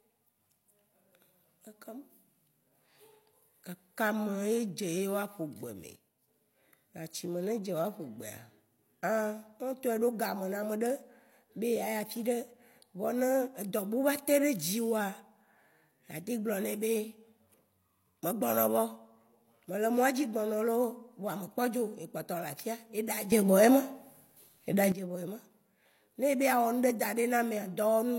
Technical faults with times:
5.96-6.28 sudden gain jump
23.32-24.92 sudden gain jump

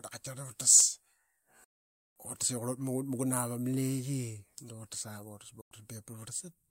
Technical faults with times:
1.64-2.17 digital broadcast dropout
5.61-5.72 digital broadcast dropout

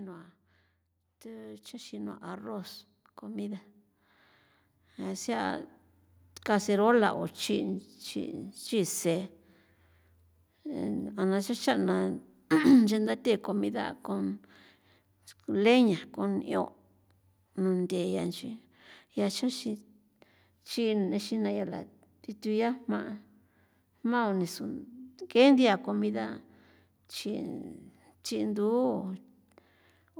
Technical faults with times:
1.22-11.03 automatic gain rising

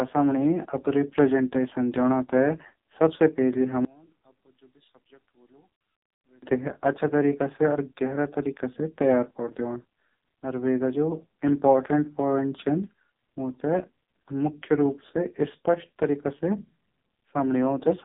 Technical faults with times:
0.00-18.04 AMR narrowband mobile codec

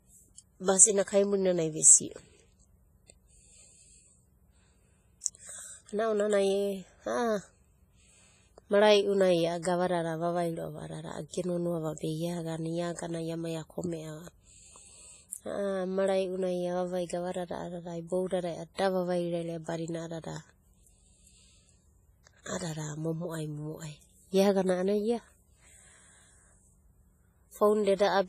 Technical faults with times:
0.00-28.28 WMA compression

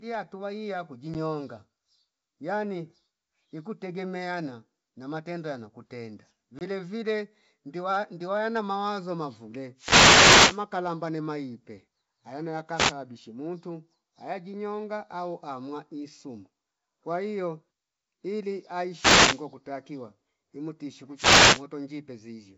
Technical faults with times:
1.14 packet loss on an ADPCM call
6.59-6.63 packet loss on an ADPCM call
9.76-10.63 wireless microphone noise hit
12.75-12.93 wireless microphone noise hit
18.91-19.44 wireless microphone noise hit
21.15-21.64 wireless microphone noise hit

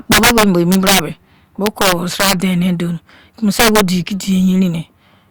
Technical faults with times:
0.12-0.99 integer overflow
1.66-2.33 integer overflow
3.59-3.81 integer overflow

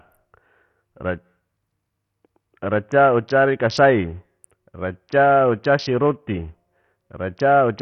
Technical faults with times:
0.00-7.81 Bluetooth SBC compression

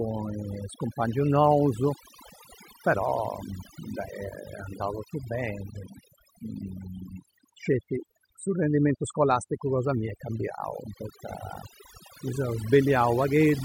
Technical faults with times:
0.00-13.64 overdone noise removal

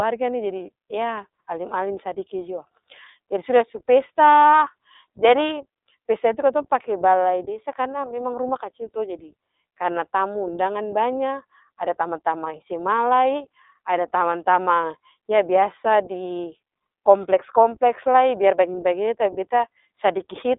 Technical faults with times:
0.00-20.59 iLBC codec

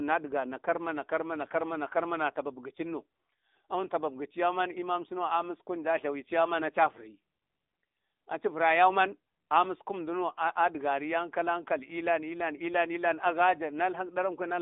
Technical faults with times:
0.00-14.62 AMR narrowband mobile codec

